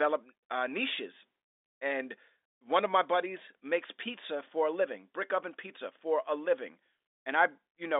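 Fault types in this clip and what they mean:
No technical faults are present.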